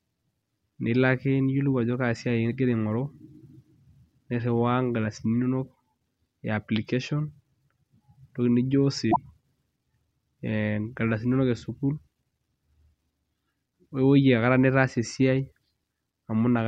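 At 9.08 s the speech breaks up in a short glitch lasting until about 9.18 s, roughly a tenth of a second, and then the audio picks up again. This is damaged data in a compressed stream: a stretch of the encoded bytes was corrupted, so the decoder misread those frames, lost its place, and had to hunt for the next valid frame header before normal playback could resume.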